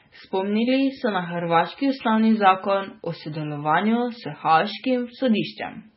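Throughout, the speech is band-limited with nothing above about 5.6 kHz and carries a heavy watery, swirling texture, likely from MP3 compression at a very low bitrate, around 16 kbps. Starved of bits, the encoder discarded the treble and let weak frequency components flicker between frames.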